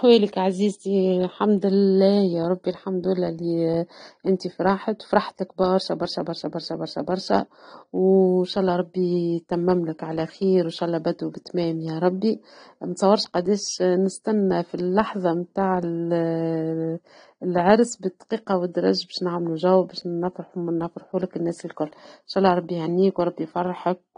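From start to finish the speech sounds dull and smeared, with a warbling, fizzy edge on sibilants and held vowels, and nothing at all above about 9.7 kHz. The likely cause is AAC compression at a bitrate low enough to leave plainly audible damage, with the spread suggesting something around 32 kbps. To save bits, the encoder has lowered its cut-off and coarsely quantised the remaining bands, which produces the dullness and the unsteady texture.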